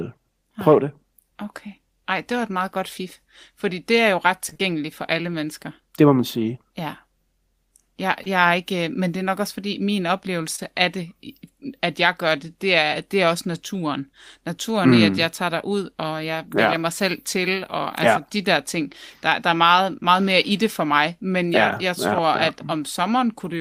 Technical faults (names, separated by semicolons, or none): short concealed packet loss